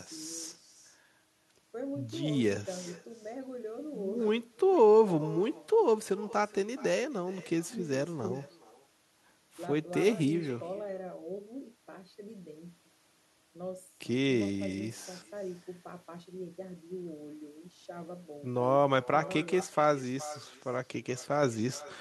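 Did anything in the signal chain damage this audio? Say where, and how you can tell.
Yes. The damage sits in call processing: this is echo with no canceller, and it runs throughout the speech. Every phrase is followed by a quieter, thinner copy arriving roughly 400 ms later, about 21 dB below the direct sound. The copy sounds band-limited. The far end is playing the call over a loudspeaker. Its microphone picks that up, and no echo canceller removes it, so the talker's own voice returns after the network round trip.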